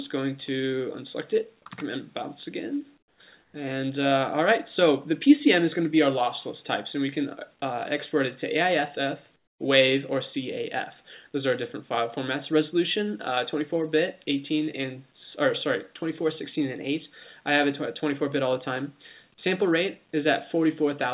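At 2.98 to 3.2 s, 3.42 to 3.54 s and 9.36 to 9.6 s you get comfort noise in place of the background: a flat hiss, about 11, 5 and 12 dB quieter, likely from discontinuous transmission.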